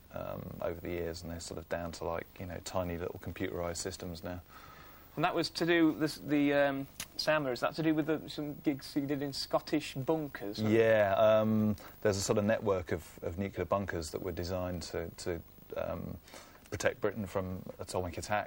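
No technical faults are audible.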